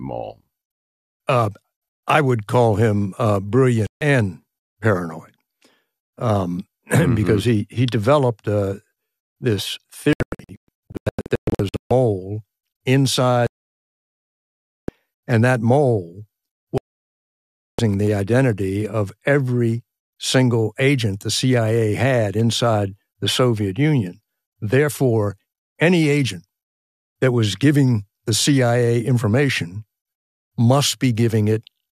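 A speech clip in which the receiver repeatedly lost the digital signal or rejected corrupted frames, causing digital broadcast dropouts. It muted at 3.87–4.02 s, then in scattered short holes from 10.13 to 11.91 s, and fully at 13.47–14.89 s and 16.78–17.79 s, with the speech in those gaps lost.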